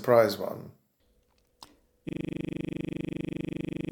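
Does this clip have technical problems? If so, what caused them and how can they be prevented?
Yes. From 2.09 s to the end of the speech clip, the sound collapses into a rigid, mechanical buzz: one 40 ms fragment repeats exactly, dozens of times, at 25 Hz. This is a system hang loop. The computer or audio driver stopped delivering new samples, but the sound hardware kept replaying the same 40 ms ring buffer until the recording ended. To prevent it, fix the driver or system stall, and have the audio device output silence rather than stale data when the buffer isn't refilled.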